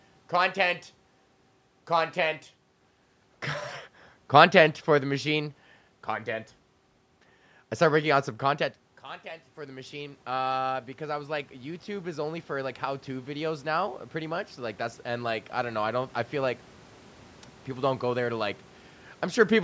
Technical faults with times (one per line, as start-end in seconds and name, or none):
9.02-10.28 automatic gain rising
11.03-16.21 automatic gain rising